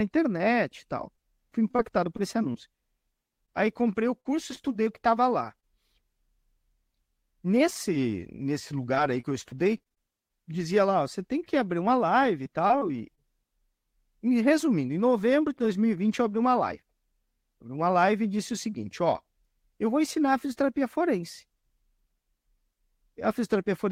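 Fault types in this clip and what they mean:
Scattered short gaps: From 1.15 to 5.64 s, just after "internet e tal", about ten brief holes fall one by one across the speech, none longer than about 40 ms. Each lost or late packet was bridged by extending the last bit of sound, patching roughly 200 ms out of 220 ms missing, around a twentieth of the stretch. The speech stays clear, with small ticks, smears and hiccups where the patches land.
Repeated packet loss (robotic sound): Between 8.54 and 10.31 s, ending just before "dizia lá você tem", packets keep dropping in quick succession, with around ten holes packed into less than two seconds. The longest is 26 ms. The receiver stretches the preceding sound into each one, covering 164 ms of the 180 ms lost, about 9% of the span. Because the holes come so close together, the repeated patching gives the speech a choppy quality with pieces missing.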